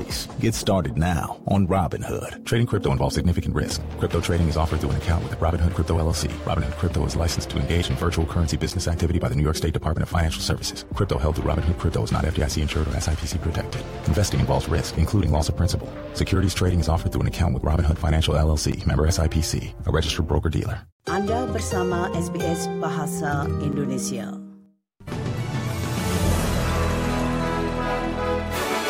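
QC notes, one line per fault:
8.70, 18.72 and 23.72 s: gap between chunks. 7 ms silent holes at 5 s chunk joins cut the sound abruptly, showing as flat-line notches in the waveform and thin vertical broadband stripes on a spectrogram.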